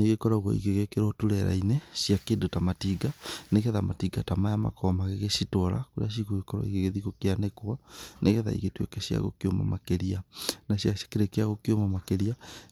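Nothing in this speech recording stands out as a technical fault at any point, so there's nothing to flag.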